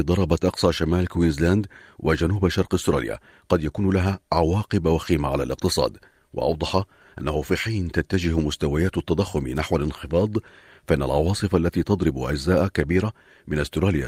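A short recording of speech, with no technical faults to report. Nothing in it points to a problem in how it was captured, processed or played back.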